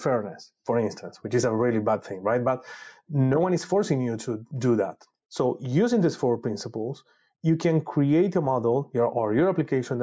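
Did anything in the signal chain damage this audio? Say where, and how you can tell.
Yes. Gain pumping runs through the whole speech clip, with the level dropping by around 5 dB under each loud syllable, leaving the level squashed. The likely cause is input gain set far too high with a fast limiter or compressor pulling it back on each peak. Unlike a noise gate, which cuts the background to near silence, this pulls the level down under loud sounds instead. The call's 8 kHz ceiling is normal.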